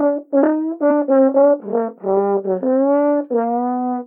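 An everyday sound recording with compressed frames skipped at 0.90 s. The audio jumps forward by something like 70 ms, which fits a few whole codec frames that were missing or rejected as damaged by the decoder and so never played. At that point the continuity of the sound is briefly broken.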